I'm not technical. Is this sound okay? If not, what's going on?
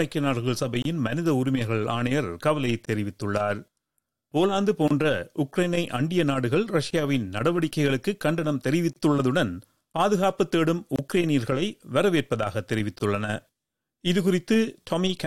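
No. There is a gap at a join of encoded pieces at 0.82, 2.85, 4.88, 6.91, 8.93, 10.96 and 12.99 seconds. The sound drops out for about 27 milliseconds every 2 seconds, then carries on from where it stopped. The audio was saved as separate 2-second chunks and stuck together. Each saving step added a sliver of silence at the chunk's start and end, and nobody trimmed it, so each join leaves a short hole.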